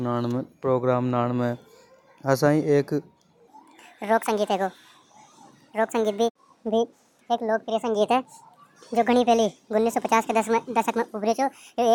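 From 3.48 s to the end, a section at the wrong speed takes over. The speech runs 1.64 times too fast. Pitch rises together with it, by roughly ten semitones. The voice turns high and hurried. The likely cause is playback against the wrong clock.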